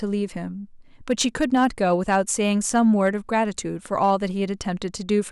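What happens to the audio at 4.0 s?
Hard clipping hits the speech from 3.98 to 4.11 s. The signal runs about 2 dB past what the stage can pass. Its peaks are sliced flat. Those squared tops add high harmonics, heard as a brief crackle on the loudest moments.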